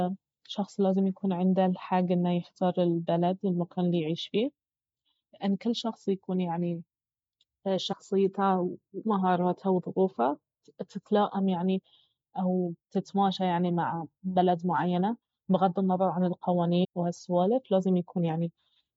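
A short glitch cuts through the speech from 7.91 to 7.94 s, and a second one, just as brief, from 16.83 to 16.85 s. Each lasts about 22 ms. Both come from damaged data in a compressed stream. Part of the encoded audio was corrupted, so the decoder misread those frames, lost its place, and had to find the next valid frame header before normal playback resumed.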